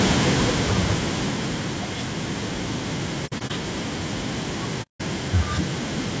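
A speech recording, this clip carries several faults. Throughout, the sound is rough and grainy, with noise filling the gaps between harmonics and a thin, artificial-sounding top band. The likely cause is low-delay AAC compression (AAC-ELD). Its short frames resolve pitch harmonics poorly, and the audible damage fits a bitrate of around 32 kbps. From 0.05 to 1.92 s, automatic gain falling takes place: the gain control judged the input too loud or its background noise too strong and eased its gain down by about 10 dB, so the speech and its background sink together. AAC frame loss with muting occurs twice. The decoder zeroed the missing frames, leaving soft-edged holes. From 3.26 to 3.52 s, 120 ms go missing in scattered gaps over 240 ms, the longest run around 70 ms. From 4.82 to 5.01 s, 180 ms of sound goes missing, fading out and back in.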